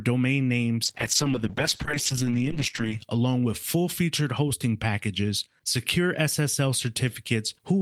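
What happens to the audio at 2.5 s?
At 2.5 s the speech is inside a call bitrate drop running from 0.86 to 3.09 s. The encoder, starved of bits, codes coarsely and trims the highs, so it sounds rough and muffled, consistent with falling from about 48 to 9 kbps. A spectrogram shows the upper band abruptly missing.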